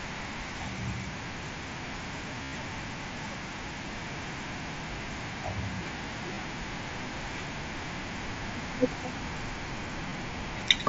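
A buzzy held tone at 2.43–2.53 s, with shorter glitches at 5.03, 6.34–6.37 and 10.09–10.12 s, is concealed Bluetooth headset packet loss: recent waveform is repeated over the missing packets.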